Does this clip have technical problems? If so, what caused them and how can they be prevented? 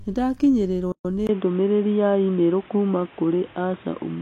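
Yes. At 0.92 s the speech drops out for about 127 ms, with smeared edges, then resumes where it stopped. This is a gap at a join of encoded pieces: separately encoded segments were spliced without trimming the encoder's start delay and end padding. Encode in one pass, or trim that delay and padding when joining.

From 1.27 s to the end, after a brief 20 ms silence, the speech turns dull and boxy with nothing above 3.8 kHz. It also gets a new background noise and shifts in level by around 5 dB. The likely cause is the input switched to a poorer device, such as a headset's call profile. Fix the input device in the recording settings and turn off automatic device switching.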